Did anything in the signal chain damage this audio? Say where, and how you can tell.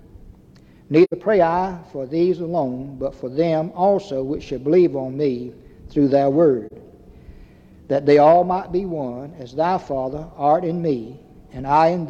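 Yes. The codec stage shows AAC frame loss with muting. Soft-edged gaps occur at 1.04–1.13 s and 6.67–6.72 s. The decoder zeroed the missing spectrum, and overlapping windows faded the sound out and in. The 85 ms gap fits two lost frames, the 43 ms gap one.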